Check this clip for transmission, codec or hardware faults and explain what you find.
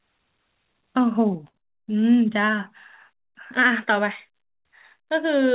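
Two network faults sit close together in this speech, both around 1.5 s, over a narrowband call path with nothing above 4 kHz.

Short stall from a late packet, 1.48 to 1.56 s: a packet arrived late and the jitter buffer ran dry, so the receiver held the last sound for about 62 ms, then resumed exactly where it stopped. Nothing is lost, but the sound hangs too long with a slight buzz or dip, and everything after runs 62 ms later.

Short concealed packet loss, 1.58 to 1.63 s: about 40 ms of audio never reached the decoder in time. The receiver bridged the gap by extending the preceding sound for roughly 27 ms and blending back into real audio, heard as a brief smear.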